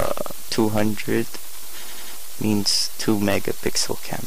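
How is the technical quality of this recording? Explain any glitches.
The recording has two technical problems: a constant DC offset running through the whole thing, and one stutter caused by repeated frames.

The DC offset is present from start to finish. The whole waveform sits shifted away from zero by a fixed amount, so the centre line is off. You can't hear it directly. What it costs you is headroom on one side, and it appears as steady energy at the very bottom of the spectrum. A high-pass filter or offset removal fixes it.

The repeated frames occur between 1.87 and 2.15 s. A short chunk of the compressed stream, about 93 ms long, was written or sent more than once, and the decoder plays it three extra times. You hear that fraction of a second looping as a stutter. It also stretches the audio by about 279 ms, so everything after that point lands later than it should.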